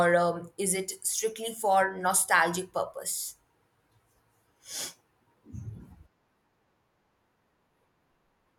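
No technical faults can be heard in this speech recording.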